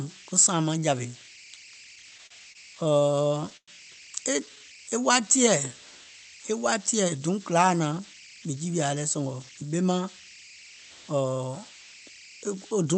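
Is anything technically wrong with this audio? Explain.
Yes, there are four distinct problems here, and the first one runs the whole way through.

Converter idle tones sit under everything: a whistle somewhere around 2 kHz, at about 20 dB below the speech, with a grainy texture under the quieter stretches. That's a delta-sigma converter running without dither. With small inputs it settles into repeating bit patterns, and those patterns come out as tones whose pitch follows the input's offset. The pauses are where they're easiest to catch.

From 1.95 s to 3.70 s you get repeated stalls, a stutter. The jitter buffer kept running dry because packets were arriving late or too slowly, so the receiver repeatedly stretched the last bit of sound to cover the holes. That adds up to roughly 288 ms of filled-in audio, about 17% of the stretch, and the longest gap is about 108 ms. Nothing is actually lost, but the speech drags and hiccups.

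There are two jitter buffer slow-downs. The first runs from 4.40 s to 5.26 s at about 91% speed and adds 90 ms. The second runs from 5.68 s to 6.05 s at about 88% speed and adds 50 ms. In both, the buffer was low, so the receiver repeated single pitch periods or slivers of pause to build a reserve. The pitch stays put, but the speech gets drawn out.

Then there's a jitter buffer speed-up from 7.99 s to 9.69 s, running at about 109%. The buffer had collected more audio than it wanted, so it trimmed out short pitch-period-sized pieces, around 150 ms in all. The pitch is unchanged, but the speech sounds noticeably hurried. All of this comes through a call codec whose top end stops near 8 kHz.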